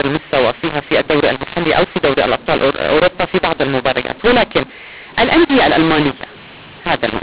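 From the first moment to the last, this speech has the mu-law and A-law mix-up: it was coded as A-law but decoded as mu-law, so sample levels land wrong. That gives a harsh, gritty distortion, and the pauses fill with hiss instead of going quiet.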